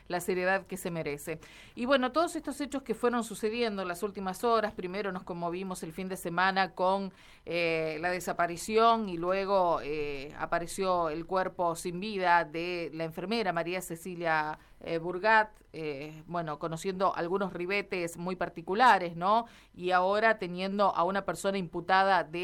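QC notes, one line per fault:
7.15–8.18 s, scattered short gaps: about seven tiny dropouts, none much past 10 ms, were bridged by extending the preceding sound. In all, roughly 70 ms, about 7% of this stretch, is filled-in rather than original, heard as ticks and brief smears. On a spectrogram, each patch shows as a thin vertical slice where frequency content freezes or repeats; the waveform shows small discontinuities at the patch edges.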